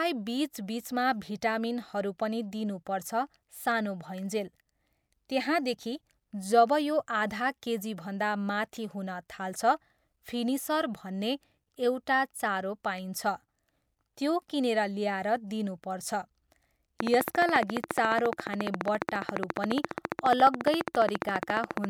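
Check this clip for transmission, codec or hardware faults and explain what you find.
There's one fault here. From 17.00 to 21.85 s a train of clicks runs, about seventy evenly spaced ticks at 14.5 per second, spiking roughly 20 dB above the speech, likely from interference or a faulty connection or power supply.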